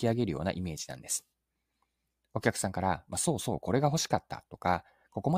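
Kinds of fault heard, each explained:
No technical faults can be heard in this speech recording; the signal stays intact and continuous throughout.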